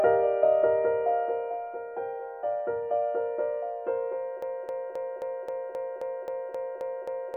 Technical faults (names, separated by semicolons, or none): broken-record loop